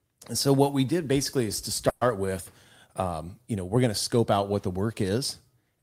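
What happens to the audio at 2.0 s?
A call audio freeze runs from 1.89 to 2.03 s. For about 120 ms the last sound is held and stretched into a fading buzz, then roughly 20 ms of silence follows before the speech resumes exactly where it stopped. This likely comes from packets being delayed in transit so the jitter buffer emptied. Nothing is lost: the pause is inserted, pushing everything after it about 120 ms later.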